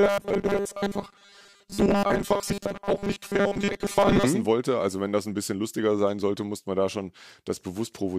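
From 0.01 to 4.24 s, audio likely arrived too seldom, so a 5 ms buffer was replayed in place of most of the real signal. This robotic sound from repeated short buffers forces a fixed 200 Hz buzz, metallic and rigid, loosely tracking the speech.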